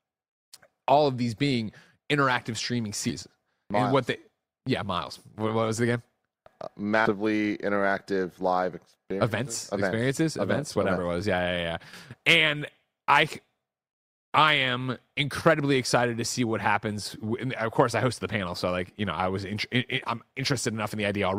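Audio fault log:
3.09–3.12 s, compressed frames skipped: right after "these being interactive streaming" the audio jumps ahead by roughly 150 ms, about seven frames lost. The jump size points to a 20 ms frame length.
7.05–7.12 s, compressed frames skipped: a larger gap of around 200 ms, about ten frames, just before "interactive live".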